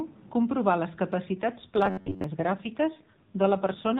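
An AMR rate drop begins at 1.34 s, right after "comprovar les", and lasts to the end. The codec falls from 12.2 to 5.9 kbps, so the speech turns rougher and more synthetic within the same narrowband.

Robotic sound from repeated short buffers runs from 1.86 to 2.24 s as a rigid metallic buzz at 93.8 Hz. It is likely caused by a roughly 10.7 ms buffer being replayed in place of most of the incoming audio.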